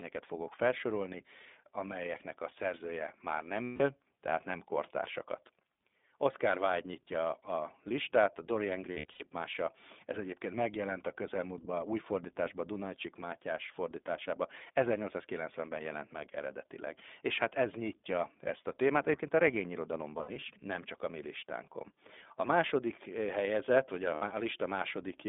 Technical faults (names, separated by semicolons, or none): iLBC codec; lost iLBC frames